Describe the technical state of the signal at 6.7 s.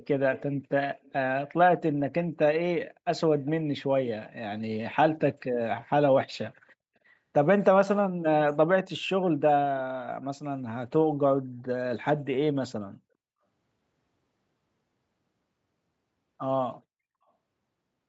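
A likely incomplete echo cancellation let a delayed copy back, so 6.68 to 6.72 s carries a very faint echo leak, 405 ms behind the speech.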